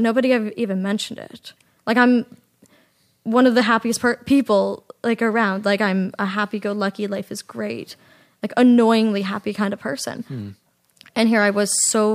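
No technical faults can be heard anywhere in this speech recording. There is no event in it that calls for a time or a value to be noted.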